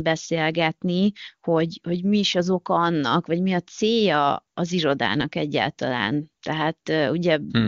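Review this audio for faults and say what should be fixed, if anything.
Nothing here needs fixing, and the speech comes across clear in the way AMR wideband (HD Voice) does at one of its higher rates, around 23.85 kbit/s by the sound of it.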